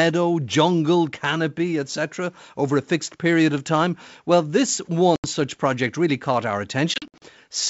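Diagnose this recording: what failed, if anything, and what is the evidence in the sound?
Network stage, packet loss on an ADPCM call: about 80 ms drops out at 5.16–5.32 s, then 160 ms in gaps from 6.94 to 7.25 s. The waveform shows flat, square-edged holes and the spectrogram shows blank strips. The decoder's predictor and step size no longer match the sender's, so speech resumes slightly distorted.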